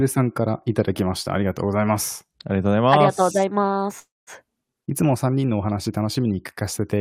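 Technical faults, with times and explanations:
3.99–4.30 s, call audio freeze: speech halts under a fading fill, largely silent, then resumes where it stopped, likely from late packets draining the jitter buffer.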